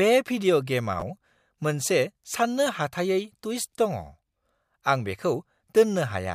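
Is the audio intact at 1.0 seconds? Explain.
No. From 1.00 to 1.02 s the speech has chunks out of order: a 10 ms chunk plays one chunk late, after the one that should follow it. That gives a brief jumbled flicker with three hard joins. Unlike a dropout, no audio is missing.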